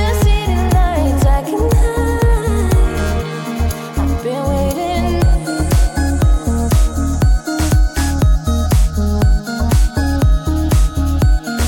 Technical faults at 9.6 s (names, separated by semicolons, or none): none